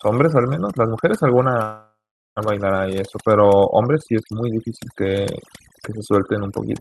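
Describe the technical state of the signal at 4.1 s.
At 4.1 s the speech carries overdone noise removal, present throughout the clip. Noise reduction set too hard is pulling individual frequency bands down near its noise estimate. Quiet speech detail goes too. The background drops and breaks up into twinkling specks.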